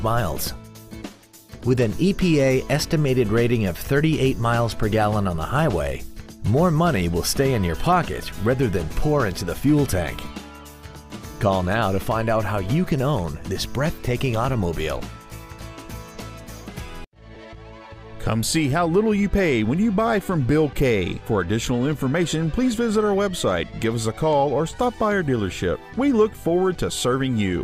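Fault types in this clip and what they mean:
Lost LE Audio frames: at 17.35 s the Bluetooth LE Audio stream drops a brief chunk of about 10 ms, which fits a single lost LC3 frame. With nothing arriving, the decoder covers the gap by repeating the last spectrum it received, with the phase signs scrambled at random. It is too short for the fill-in to fade toward silence, so the result is a momentary smeared, noisy blip in the sound.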